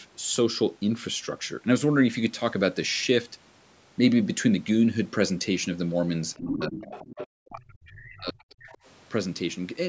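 From 6.34 to 6.54 s a second voice sits about 10 dB under the speech. This is the other side's voice leaking through, likely loudspeaker echo the canceller left in the microphone. It returns from 6.82 to 7.27 s at about 15 dB down, then as faint scraps at 7.86 to 7.93 s and 8.6 to 8.78 s, around 25 to 30 dB down. Unlike suppression, it adds a foreign voice rather than taking level away from the talker.

Overlapping this, from 6.39 to 6.84 s, the talker's own speech dips by as much as about 25 dB. That is likely speech suppressed in double talk. A deeper cut of up to about 40 dB follows from 7.42 to 8.38 s. Here the talker's voice itself is ducked or broken up, rather than a second voice being added.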